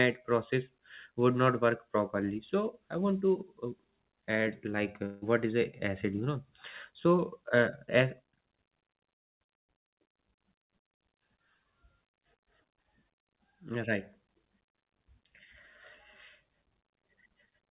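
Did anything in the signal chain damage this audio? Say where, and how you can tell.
Yes: two long network dropouts, likely packet loss. At 5.06 s, between "add like" and "is a acid", 160 ms is replaced by a fading buzz. At 9.16 s, 240 ms decays into a near-silent gap. A spectrogram shows smeared, fading bands, then a blank column before sound resumes.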